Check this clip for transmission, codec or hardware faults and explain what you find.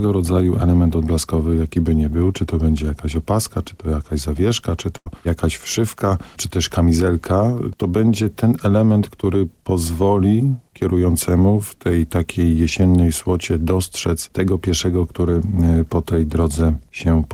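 There is one transmission fault. From 4.97 to 5.07 s, the sound freezes into a held, fading copy of the last sound for about 83 ms, then jumps ahead. This is a burst of packet loss: the receiver stretched the last sound over the gap, and about 90 ms of audio is missing.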